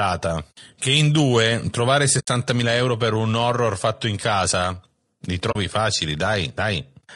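Throughout, the speech sounds rough and grainy, with a hazy fill between the harmonics and a thin, synthetic top band. This is likely low-delay AAC compression, such as the AAC-ELD used in video calls, at a low bitrate near 32 kbps. Its short frames resolve pitch structure poorly.

At 2.19 s and again at 5.51 s the sound fades into a brief, soft-edged gap of about 80 ms and then about 40 ms. This is AAC frame loss with muting. Whole frames went missing, and the decoder zeroed their spectrum while the overlapping windows smoothed the edges.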